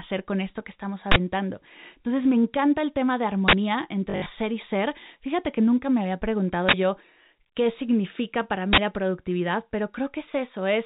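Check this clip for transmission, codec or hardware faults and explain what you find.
Two faults stand out: recurring bursts from an uninitialised buffer, and one patch of packet loss with the last packet repeated, all riding on a G.711 A-law telephone path that keeps everything under 4 kHz.

The uninitialised buffer bursts hit at 1.12 s (right after "con esto que estamos"), 3.48 s, 6.69 s and 8.73 s (between "yo qué significa para" and "la productividad"). Each is a harsh, loud blast of digital noise about 46 ms long, which fits a 2048-sample buffer being played out before real audio landed in it.

The packet loss with last packet repeated runs from 4.10 to 4.26 s, just before "y ser". About 120 ms went missing across that 160 ms stretch, the longest gap being 60 ms. The receiver kept replaying the previous chunk, so you get a robotic stutter, which points to roughly six lost 20 ms packets.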